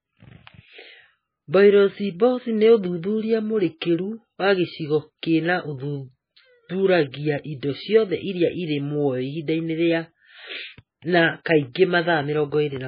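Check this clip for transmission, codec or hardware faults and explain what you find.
There are two codec faults: heavy compression across the whole clip, plus two brief pre-echoes near the end.

MP3 compression: throughout, nothing survives above 5 kHz and the speech sounds watery and swirly. This is likely a starved MP3 encoder, one that points to a bitrate of around 17 kbps, chopping treble and switching weak frequency lines on and off.

Pre-echo: at 11.44 s, and again from 11.72 to 11.75 s, short hisses of about 17 and 28 ms precede attacks. The block's quantisation noise spills into the quiet moment before each onset, so the attacks sound smeared.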